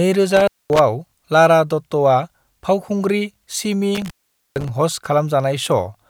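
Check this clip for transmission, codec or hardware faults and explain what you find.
Two intermittent contact faults affect this speech. A loose cable or plug briefly opens, cutting the signal with crackle at the edges and faint hiss: at 0.37–0.79 s (about 0.23 s open) and 3.95–4.69 s after "फावखुंग्रि सिमी" (about 0.46 s open).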